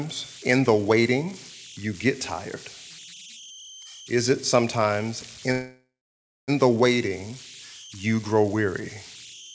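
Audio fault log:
throughout: converter idle tones. The delta-sigma converter ran without dither, so on small inputs its bit stream fell into repeating patterns rather than noise-like error. Those patterns form a whistle around 3 kHz, at about 18 dB below the speech, heard in the pauses and as a gritty texture beneath quiet passages. It sits well inside the call path's band, which carries nothing above 8 kHz, so the codec does not remove it.
5.52–6.50 s: call audio freeze. Packets were likely held up in transit, emptying the jitter buffer, so the receiver stretched the last sound for 0.96 s as a buzz that decays into about 0.59 s of silence. When the packets arrived, playback resumed exactly where it had stopped. No audio is lost, but everything after this point plays 0.96 s later than it should.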